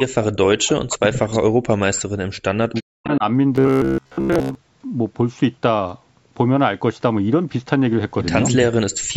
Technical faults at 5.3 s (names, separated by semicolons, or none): none